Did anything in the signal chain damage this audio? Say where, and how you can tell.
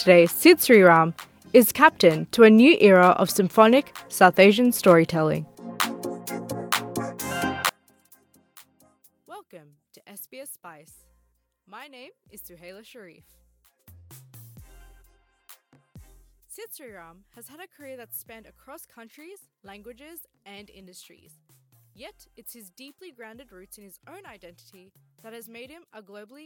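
Yes. From 7.69 s to the end, one channel inverted is the fault: one side of the stereo pair has been flipped in polarity, most likely by a miswired balanced lead in the analogue wiring. Once the channels are summed to mono, everything common to both cancels, so the level drops by about 30 dB and the centred content and bass nearly disappear, leaving only a faint residue of what differs between left and right.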